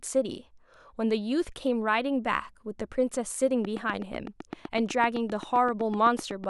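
From 3.65 s to 6.45 s a train of clicks runs over the speech: about twenty near-identical pulses at a steady 7.9 per second, each peaking roughly 10 dB above the signal. They sound like sharp, even ticking that carries through the pauses as well as the speech. The regular spacing and consistent shape point to an external pulse source, likely electrical interference from nearby equipment or a faulty connection or power supply.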